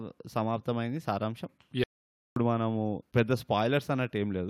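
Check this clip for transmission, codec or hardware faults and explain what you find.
One fault is present: a playback stall in this speech clip. From 1.84 s to 2.36 s the output goes fully silent for about 525 ms, then the speech resumes. The likely cause is the player starving for data or its output thread being blocked, so nothing reached the device until it caught up. Unlike a brief dropout or a concealed packet loss, the gap is long and clean, with no smeared or repeated sound filling it.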